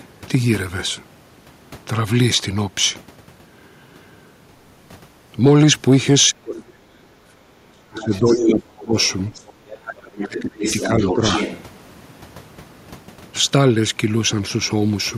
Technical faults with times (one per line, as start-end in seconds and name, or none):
6.29-8.95 speech suppressed in double talk
7.99-8.63 other side's voice leaking through
9.00-11.63 other side's voice leaking through
9.64-11.22 speech suppressed in double talk